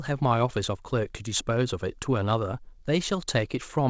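Nothing goes wrong in this speech at any point; it has simply come over a call line, with nothing above 8 kHz, which fits a wideband codec such as G.722.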